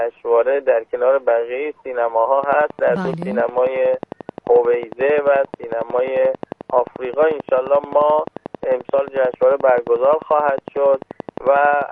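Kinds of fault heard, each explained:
Train of clicks: likely interference from nearby equipment or a faulty connection or power supply, injecting a short pulse into the signal over and over. It is heard as steady ticking at 11.3 per second from 2.44 to 11.83 s, roughly a hundred clicks, peaking about 5 dB above the sound.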